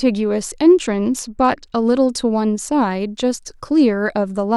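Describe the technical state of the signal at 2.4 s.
The signal at 2.4 s is intact, with no audible fault at that moment.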